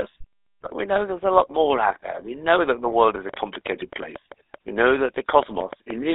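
The whole clip of speech has been through the GSM full-rate codec, with the sound confined to roughly 0.3 to 3.7 kHz, which fits a 13 kbps GSM full-rate link. The codec rebuilds the voice from a vocal-tract filter driven by a sparse, regularly spaced pulse excitation. That coarse excitation leaves a plainly audible buzzy, gravelly roughness on every voiced stretch. The missing upper band removes sibilant detail and gives the familiar thin mobile-phone quality.

GSM bit errors break through at 0.62 to 0.67 s, just before "we know there's a", and again at 2.90 to 2.96 s, just after "know that the". Corrupted bits in the received stream were decoded as wrong filter, pitch or gain parameters. The short bursts point to two damaged frames in the first case and three in the second. Each lasts only a few tens of milliseconds and is heard as a brief squawk or gargling pop, with the spectrum suddenly bent and the level jumping.

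From 3.29 to 5.92 s a train of clicks runs over the audio at about five per second, unevenly spaced and around 15 in all. The pulses peak about 10 dB above the signal and share much the same shape. They sound as sharp ticking that carries through pauses as well as speech. The cause is likely electrical interference or a faltering interface injecting short pulses into the signal path.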